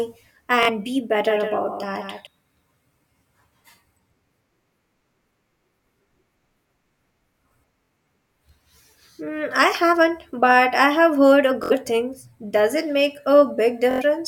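At 0.63 to 0.70 s, a Bluetooth stutter clips the speech. Lost or late packets made the receiver replay its last slice, giving a brief buzzing repeat. The sound then jumps ahead by about 46 ms.

From 1.21 to 2.27 s, the speech is doubled. A second full-band copy trails about 150 ms behind, roughly 5 dB quieter, with no room colour. It starts and stops abruptly. A slower second capture path is the likely cause.

More Bluetooth stutters follow at 7.85 to 7.90 s, losing about 46 ms, and at 11.64 to 11.72 s, just after "I have heard a", losing about 70 ms. The last, at 13.91 to 14.02 s, loses about 93 ms as a longer machine-gun rattle.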